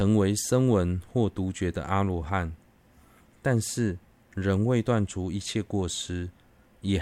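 No technical faults are audible.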